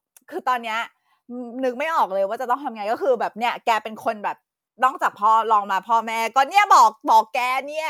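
No dropouts, distortion, timing errors or other technical faults occur anywhere in this speech recording.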